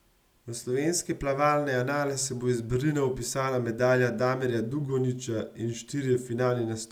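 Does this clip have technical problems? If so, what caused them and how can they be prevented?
No, nothing in this speech clip points to a technical fault, so there is no cause to trace and nothing to prevent.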